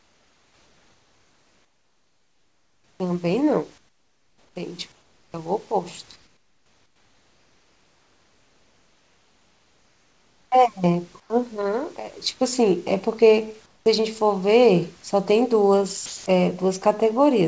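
From 0.0 to 3.0 s, 3.78 to 4.56 s, 4.92 to 5.34 s, 6.16 to 10.52 s, 11.20 to 11.30 s and 13.66 to 13.86 s, the real room background gives way to comfort noise. It is steady and featureless. It sits about 6 to 15 dB quieter than the surrounding background. The likely cause is discontinuous transmission: the sender stopped sending when its voice detector heard no speech, and the receiver synthesised noise.

At 13.81 s, the speech returns with its onset clipped by the voice detector. About 50 ms of the start is missing, so the speech begins abruptly. The detector was likely late to sense that speech had resumed, so comfort noise filled that gap.

From 16.06 to 16.26 s, the detector drops sound. About 100 ms of sound is lost and comfort noise covers the 200 ms span. The detector likely mistook the sound for background. Throughout, the call codec passes nothing above 8 kHz.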